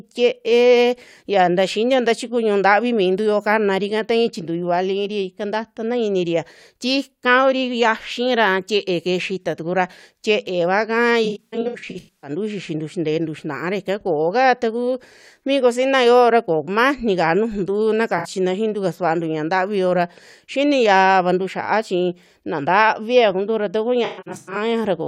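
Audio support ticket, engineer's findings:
AAC frame loss with concealment, three spots in the speech. 11.25–12.30 s: about 640 ms missing, scattered over roughly a second, runs up to about 100 ms. Smeared, phasey patches where the decoder reuses the last good spectrum. 18.18–18.27 s: brief 64 ms smear right before "xiintu kasuantu". 24.05–24.57 s: after "kuntura taku", 384 ms lost across 512 ms, longest run around 150 ms. Lost AAC frames filled in by the decoder's concealment.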